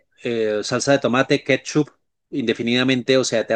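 Nothing goes wrong anywhere in the recording, so there's no fault to point to at any moment.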